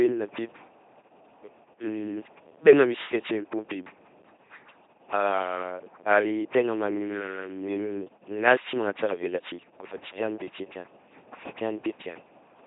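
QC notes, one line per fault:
Throughout, LPC-10 vocoder: the speech has been rebuilt from a short all-pole vocal tract filter driven by either a pulse train or noise, which fits a 2.4 kbit/s LPC-10 stream. Each moment is forced wholly voiced or unvoiced, giving a heavily buzzing, mechanical robot voice with stray buzz or hiss on wrong voicing decisions, and nothing above 3.8 kHz.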